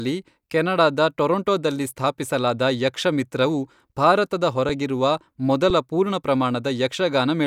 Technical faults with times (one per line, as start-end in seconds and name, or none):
4.69 underrun with held sample
5.70 underrun with held sample